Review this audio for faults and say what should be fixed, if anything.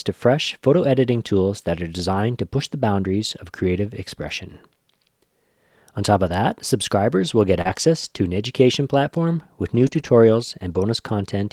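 Lost packets rebuilt from error correction appear at 2.11–2.21 s (after "editing tools that are"), 6.25–6.27 s (after "top of"), 7.65–7.75 s, 9.75–10.09 s and 10.71–10.81 s. Each patch was decoded from a low-bitrate copy carried in the following packet, so there is no gap. The patches sound rougher and noisier. On a spectrogram they show as smeared blocks.

Short concealed packet loss occurs at 7.61–7.67 s, between "that subscribers will get" and "to an education platform". About 40 ms never arrived. The decoder extended the preceding sound to fill the hole, then blended back into the real audio, which gives a brief smear. A spectrogram shows frozen harmonics or shaped noise.

To fix both, reduce packet loss on the network path and give the jitter buffer enough depth so late packets still arrive in time to be decoded.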